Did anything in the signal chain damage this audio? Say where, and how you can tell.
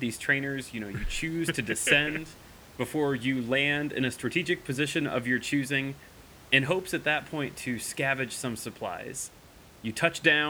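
No, nothing in the chain has damaged this speech, and the only thing in the background is the room's own noise sitting about 23 dB below the talking, which came in through the microphone rather than from anything the system did.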